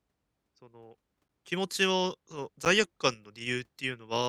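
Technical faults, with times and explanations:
1.28 s and 2.65 s, block of digital silence: about 10 ms of audio cuts out and back with no fade, so you hear a brief tick, likely from a missed buffer fill.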